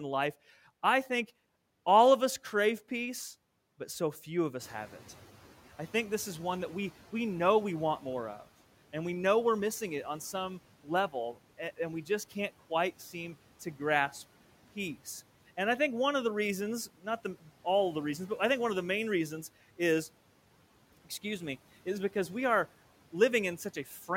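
At 4.6 s the noise suppressor is caught out: the room noise jumps by about 14 dB at around four and a half seconds, and the suppressor's noise estimate lags behind the change. Until 6.95 s the louder background passes through under the speech with too little reduction, a sudden lift. Over those 2.35 s it then sinks by about 8 dB as the estimate catches up, from a level about 24 dB below the speech.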